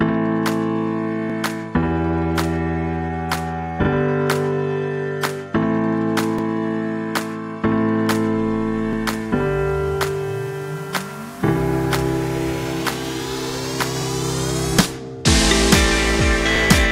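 At 6.39 s, about 44 ms of audio plays twice in a row, ending at 6.43 s. This is an overlapping chunks fault. The audio was handled in blocks of 2.5 s, and at this join the new block began before the previous one had finished. The tail of one block and the head of the next therefore cover the same stretch. The doubled fragment is heard as a brief stutter or click.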